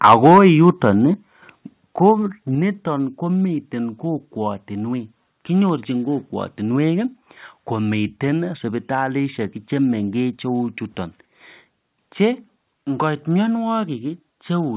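From 0.04 to 0.39 s, and again from 0.68 to 0.88 s, the loudest peaks crackle harshly. This is microphone overload, likely from input gain driving the converter about 6 dB, then about 1 dB, past its limit. At 0.14, 1.14 and 2.55 s, the level drops abruptly by about 3, 5 and 4 dB. This is the microphone volume stepped down, likely by automatic gain control reacting to clipping. Through the G.711 A-law call path, nothing above 4 kHz remains.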